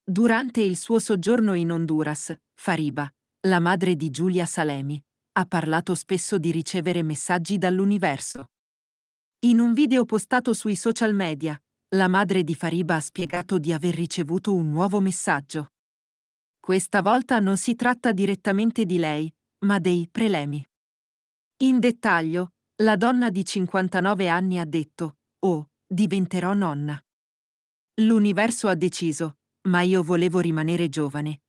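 Choppy stuttering breaks up the speech from 8.31 to 8.48 s and from 13.20 to 13.46 s, just before "di aver ricevuto un". This is repeated packet loss (robotic sound): rapid holes, none longer than 24 ms, each patched by extending the preceding sound, so about half of each stretch is filler.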